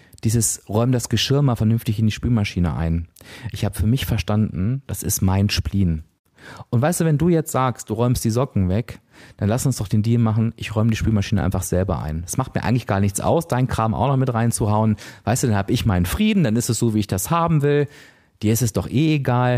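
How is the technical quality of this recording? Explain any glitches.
Listening closely to the recording, I heard no glitches or technical problems that stood out.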